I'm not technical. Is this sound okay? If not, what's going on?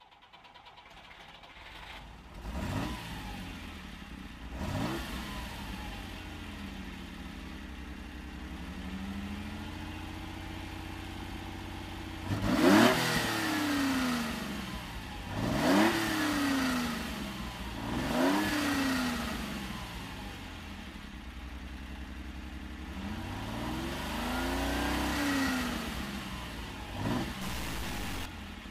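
No. From 27.42 to 28.26 seconds, a harsh, buzzy roughness appears. This is a stuck bit, likely from a faulty connection or converter.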